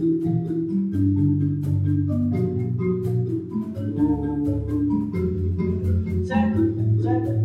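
No technical faults can be heard in this sound recording.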